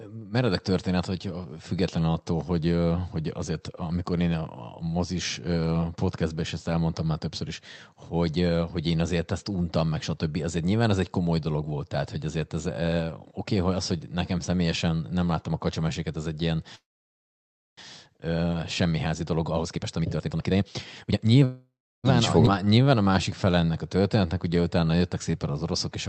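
Right after "kacsameséket ez egy ilyen", at 16.75 s, the speech stalls in a call audio freeze that runs to 17.79 s. The last bit of sound is held briefly as a fading buzz, then there's almost a second of silence. When it picks up again nothing has been lost; the audio just carries on from where it stopped. That pattern points to packets likely held up in transit and the jitter buffer running dry, so about a second of extra delay got stitched in.

From 18.85 to 21.42 s the jitter buffer speed-up kicks in. Having built up that backlog, the receiver trims out tiny pitch-period-sized slices over and over to catch up. Pitch stays put but the talking rate climbs to roughly 134% of normal, so it sounds rushed. Over those two and a half seconds something like a second of audio gets shaved away.

Almost immediately there's a second freeze, from 21.45 to 22.06 s. Same story on a smaller scale: a short fading tail, then about a third of a second of silence, with the speech resuming intact. 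This adds roughly 0.59 s of delay.

Then at 22.46–22.48 s you get a skip ahead. Playback jumps forward with only a few milliseconds of fill, and around 0.3 s of speech simply goes missing. The two sides butt straight together, which is what you hear when a chunk is dropped while later audio is already queued.

Last, from 22.65 to 25.53 s there's a jitter buffer slow-down. Here the buffer is topping itself up by repeating single pitch periods and stretching pauses. Playback drops to about 89% speed at unchanged pitch, adding roughly 0.32 s, so sounds come out a bit drawn out. Underneath all of it sits the normal Opus call path, with the highs rolled off above 8 kHz.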